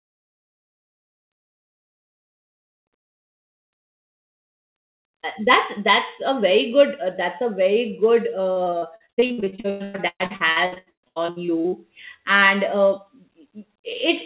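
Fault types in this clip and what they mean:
Repeated packet loss (robotic sound): packets kept going missing or arriving too late from 8.52 to 11.74 s, and the receiver covered each hole by extending the last sound it had played. Dozens of short dropouts, the longest about 117 ms, leave close to half of that stretch, roughly 1.5 s, as patched-in filler. The speech turns choppy with pieces gone, clearing just before "and uh". Throughout, nothing above 4 kHz comes through, as on a narrowband call line.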